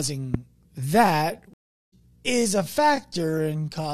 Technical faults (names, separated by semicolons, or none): loud pop; time-stretched section; stream reconnect